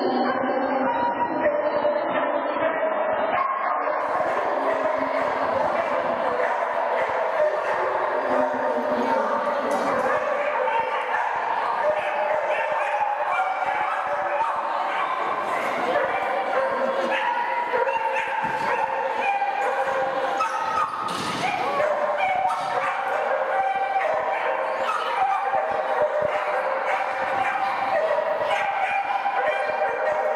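For the first 4.0 seconds the stream is on its low-bitrate start: nothing above about 5.6 kHz, dull and smeary, which fits something like 16 kbit/s AAC. Once the player has sized up the connection it jumps to a much richer rendition, roughly 96 kbit/s, with no gap.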